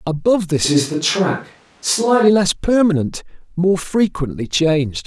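Speech whose sound turns abruptly roomy and thin from 0.66 to 2.27 s at unchanged level, likely a switch to a distant microphone; the sudden flips, unlike gradual reverb, mark it.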